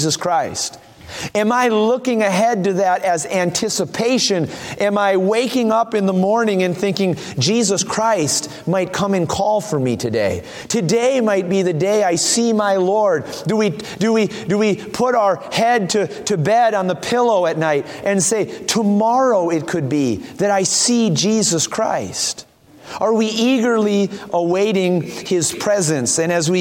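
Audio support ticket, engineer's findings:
Nothing to flag here, no audible faults anywhere in the recording, so this one can be closed out as is.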